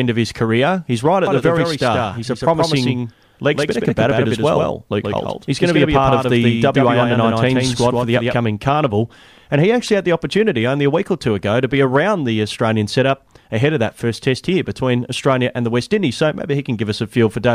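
From 1.27 to 8.35 s, just after "right at", a doubled audio track appears. The most likely cause is a second capture path. A full-band copy trails by about 150 ms, around 5 dB quieter, with no room colour. It shows as ghosted spectrogram edges and starts and stops abruptly.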